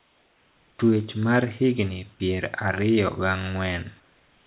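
From 0.00 to 0.78 s and again from 4.00 s to the end at about 4.46 s, the room background gives way to a flat, featureless hiss, about 3 dB quieter than the real ambience it covers. That's comfort noise in place of the background, likely because the sender's voice detector stopped transmitting during the pauses and the receiver filled them with synthetic noise. The whole call band stops at 4 kHz, which fits G.711.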